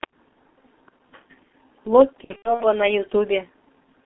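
Throughout the recording, speech passes through the G.723.1 codec at what sounds like its 6.3 kbit/s rate, heavily compressed within a 250 Hz to 3.4 kHz telephone band. Its coarse, slowly updated voice model leaves the voice muffled and hoarse, with smeared consonants.

From 2.24 to 2.66 s, VoIP packet loss is concealed by the speech codec. About 210 ms of audio goes missing, scattered over 360 ms with the longest gap 90 ms. The decoder stretches its last pitch into a fading buzz, and the voice stays weak afterwards.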